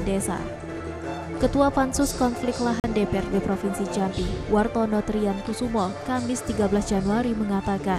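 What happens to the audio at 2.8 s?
From 2.80 to 2.84 s the sound cuts out for 40.6 ms, likely a Bluetooth dropout in which packets missed the headphones in time. The waveform goes flat between abrupt or briefly faded edges, a blank vertical stripe on a spectrogram, and the sound resumes further along.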